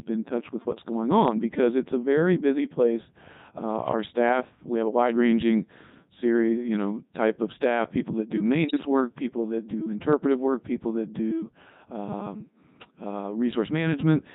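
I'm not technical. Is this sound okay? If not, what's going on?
No. Throughout, the speech comes through the Codec 2 vocoder. The voice is rebuilt from a rough outline of pitch and tone rather than recorded, so it sounds robotic and buzzy instead of just muffled.

From 8.68 to 8.86 s, between "staff people that do" and "work people that do", bit errors on digital voice radio make the voice warble and jump in pitch and loudness. The sound doesn't drop out to silence; it garbles into bleeps.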